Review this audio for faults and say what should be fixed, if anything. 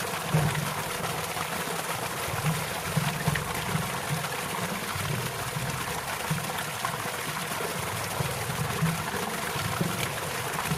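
No faults turn up in this audio, so nothing needs to be fixed.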